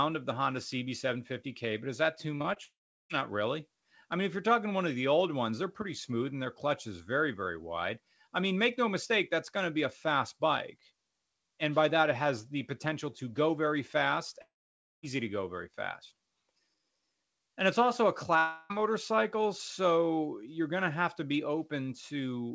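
A speech recording over a call link, with nothing above 8 kHz, which fits a G.722 path at 64 kbps, and two kinds of fault. Short concealed packet loss appears at 2.36 to 2.42 s, 2.42 to 2.46 s and 2.54 s: brief smears where the decoder extended the preceding sound for 18 to 40 ms and then blended back. The long network dropouts at 2.64 to 3.12 s, 14.42 to 15.05 s and 18.39 to 18.72 s are likely caused by lost network delivery. They differ from the short losses in that a buzzy continuation fades out, followed by silence of about 0.37 s and 0.55 s in the first two. The third is filled throughout, and each resumes with the missing portion gone.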